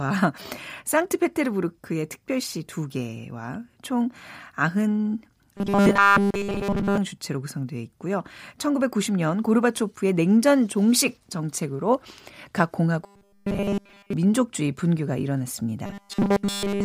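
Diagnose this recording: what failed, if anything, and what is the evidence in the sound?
Speech turns into a rigid metallic buzz pinned at 200 Hz from 5.57 to 6.98 s, 13.04 to 14.13 s and 15.86 s to the end. This robotic sound from repeated short buffers likely comes from a starved driver buffer looping about 5 ms, replacing nearly all real audio.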